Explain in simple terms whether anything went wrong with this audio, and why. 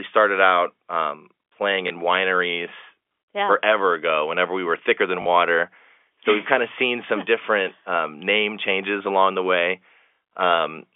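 Twice, pieces of the speech went missing on the way, and the receiver filled each gap by replaying the last piece it had. This is packet loss with last packet repeated. At 1.88 s, between "started out um playing" and "wineries yeah forever ago," a 20 ms gap is patched, which fits one lost packet. At 5.22 to 5.26 s, after "we were thicker than," the patch lasts 40 ms. The first sounds like a small blip and the second like a short robotic stutter, over the narrow telephone-line sound.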